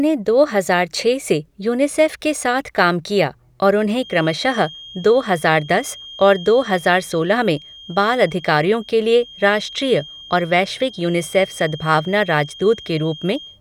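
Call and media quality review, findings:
Feedback whistle, 3.88 s to end: steady 3.2 kHz tone about 20 dB under speech; likely loudspeaker-mic loop held at threshold. Spectrogram: one thin horizontal line.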